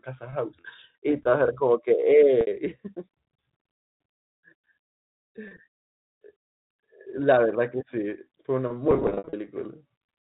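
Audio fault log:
0.60–0.64 s, 2.41–2.47 s, 5.48–5.51 s, 8.91–9.33 s: packet loss with pitch repetition. The receiver repeats the last pitch period across 40, 60 and 30 ms gaps, which briefly holds the 4 kHz telephone-band sound in a buzzy tone. The final span scatters 270 ms of losses, runs up to 60 ms, over 420 ms.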